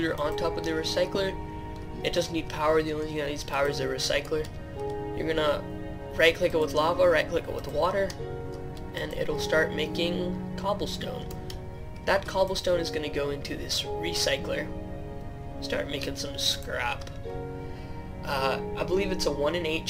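The audio shows no technical fault at any point: the signal holds steady, with no interruptions, distortion or level problems to be heard.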